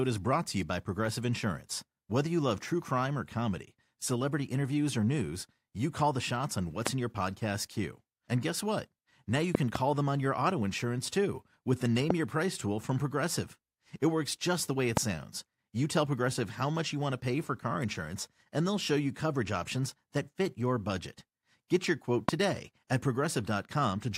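Loud pops hit at 6.87–6.89 s, 9.55–9.78 s (two pops), 12.10–12.13 s, 14.97–14.99 s and 22.29–22.31 s, about 20 dB above the speech, likely from electrical voltage spikes. Waveform: tall isolated spikes. Spectrogram: thin full-band vertical lines, speech continuing beneath.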